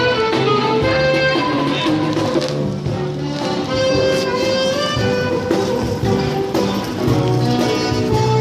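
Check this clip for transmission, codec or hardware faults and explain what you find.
No transmission, codec or hardware faults turn up anywhere in this clip.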